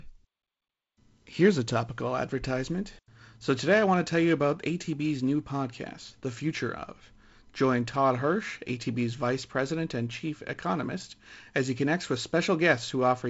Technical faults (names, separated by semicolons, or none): none